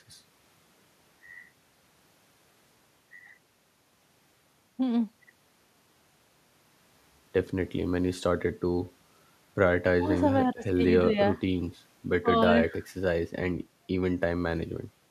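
No technical faults can be heard in this speech recording.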